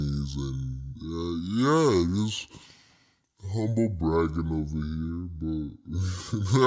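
From start to finish the speech sounds low and slow, dropped about 7 semitones and running at two-thirds of its normal pace, with pitch and tempo falling together. That pairing marks a wrong sample rate: the samples are being played out more slowly than they were captured, with no conversion between the two rates. A ratio of 0.667 fits 24 kHz material played at 16 kHz.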